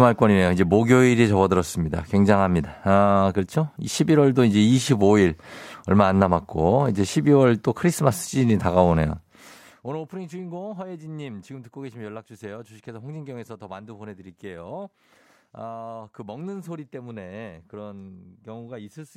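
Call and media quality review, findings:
No faults found in this recording.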